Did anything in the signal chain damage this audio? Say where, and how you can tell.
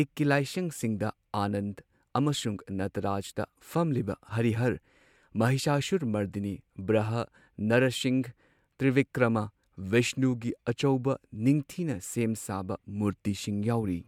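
No, nothing in the chain damaged it.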